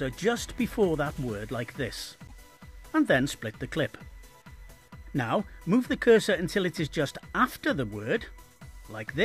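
At 2.26–2.32 s the sound skips ahead through a brief chirp, burst of noise or short hole, likely a broken MP3 bit reservoir decoding wrong data.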